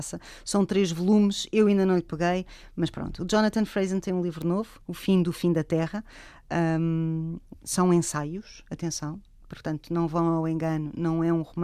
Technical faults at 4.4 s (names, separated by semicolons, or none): bit error spike